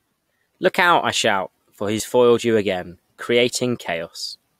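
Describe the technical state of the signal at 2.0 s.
At 2.00 s, between "out I shout for" and "foiled you again", there is an overlap between stream segments. Two segments claim the same few milliseconds, the player trims that stretch, and the waveform jumps, giving a tiny skip. Unlike a dropout, nothing silent is inserted; audio simply goes missing.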